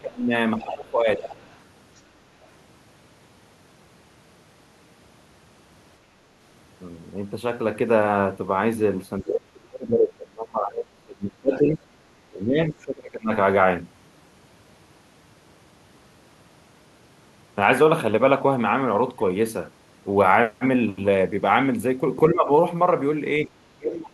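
Speech suppressed in double talk, from 0.0 to 1.24 s: the speech dips by roughly 20 dB. The likely cause is an echo canceller that met both sides talking at once, could not tell this talker from loudspeaker echo, and turned everything down.

The other side's voice leaking through, from 1.22 to 1.58 s and again from 1.96 to 2.01 s: a second voice comes through, about 15 dB below the speech in the first stretch and only a faint scrap near about 40 dB down in the second. This is likely residual loudspeaker echo that the canceller failed to strip from the microphone.

The suppression returns from 9.2 to 11.86 s and from 12.3 to 13.32 s, with drops of roughly 25 dB. Two briefer episodes follow, a shallow dip of about 10 dB from 22.31 to 22.5 s and a cut of roughly 30 dB from 23.47 s to the end.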